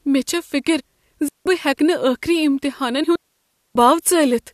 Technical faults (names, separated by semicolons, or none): compressed frames skipped; digital wireless dropout